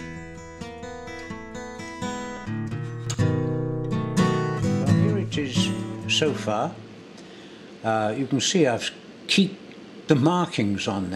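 At 3.07 s there is a sudden gain jump of about 6 dB that lasts to the end. Sound and background noise step up together. A gain change applied without a ramp is the likely cause.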